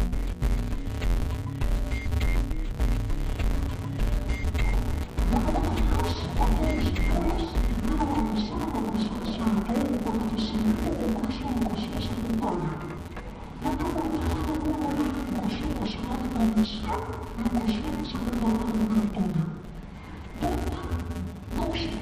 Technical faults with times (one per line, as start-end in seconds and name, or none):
0.00-22.01 interleaved audio read as planar